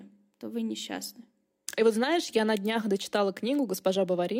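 No technical faults can be heard anywhere in this speech recording. There is nothing in it that needs a timestamp or a fix.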